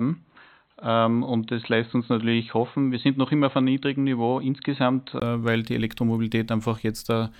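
From 0 to 5.22 s the speech is dull and boxy, likely an input switched to a poorer device: the spectrogram is empty above 4.1 kHz, then a 20 ms gap appears before "weil die".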